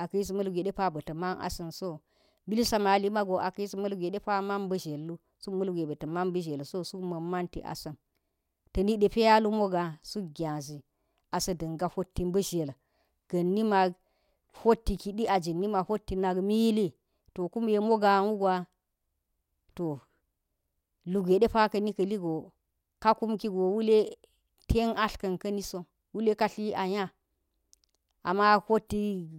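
No technical faults can be heard anywhere in the recording.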